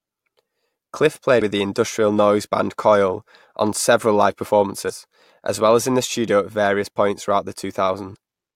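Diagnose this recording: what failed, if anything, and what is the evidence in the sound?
Damaged data in a compressed stream causes three short blips, at 1.38 to 1.42 s just before "the industrial noise band", at 4.86 to 4.91 s between "on several live" and "as well as in", and at 8.13 to 8.16 s. Each lasts roughly 40 to 50 ms. The failure sits at the codec or storage stage. Corrupted bytes made the decoder misread those frames and lose sync until it found the next valid frame header.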